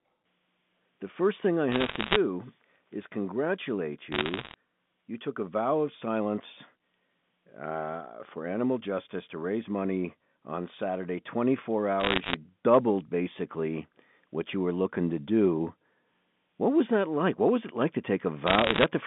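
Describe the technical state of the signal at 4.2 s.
Bit errors on a digital phone line run from 4.12 to 4.54 s, so 4.2 s falls inside the burst. Roughly one bit in a hundred is flipped on the G.711 mu-law line, and each flip corrupts a single sample. Flips landing on the upper bits, or on the sign of a loud sample, throw that sample far from its true value, producing sharp ticks that cluster into a crackle laid over the narrowband speech, while the speech itself carries through unchanged beneath it.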